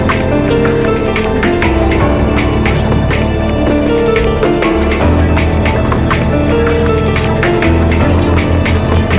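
A train of clicks runs from 7.46 s to the end at 9.18 s: near-identical pulses arrive at a steady 4.65 per second, peaking roughly 5 dB above the audio. This is likely interference from nearby equipment or a faulty connection or power supply, ticking over the sound and its pauses alike. The audio's band stops at 4 kHz, which fits a G.711 A-law call codec at 64 kbps.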